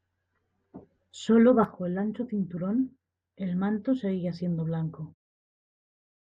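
There are no technical faults to describe in this speech clip.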